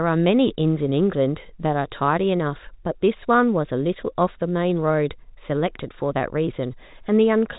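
No technical faults can be heard in the speech, which carries the narrow band of G.711 telephone coding, with nothing above about 3.8 kHz.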